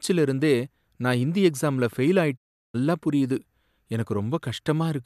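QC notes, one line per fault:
2.36–2.76 s, digital broadcast dropout: just after "நான் ஹிந்தி எக்ஸாம்ல ஃபெயில்" the speech fades out in about 20 ms, stays fully silent for 360 ms, then fades back in. The receiver muted while corrupted frames arrived, consistent with roughly fifteen consecutive frames failing their checks. What was sent during the gap is gone rather than delayed. Unlike packet-loss concealment, there is no smeared or repeated fill, only clean silence between brief fades.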